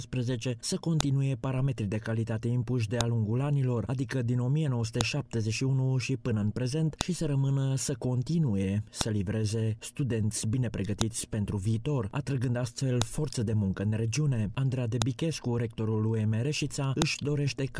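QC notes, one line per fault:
1.0 to 17.0 s, every 2.0 s: file header played as audio. Nine sharp, loud clicks, each a millisecond or two long, open every 2-second piece regardless of the surrounding sound. Each joined WAV segment kept its header, and those bytes are decoded as samples.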